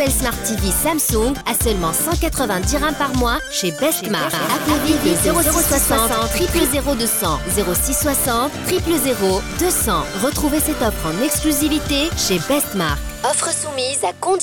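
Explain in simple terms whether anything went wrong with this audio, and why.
Doubled audio track, 4.33 to 6.67 s: an equally loud copy trails about a fifth of a second behind, likely a slower second capture or a misaligned edit.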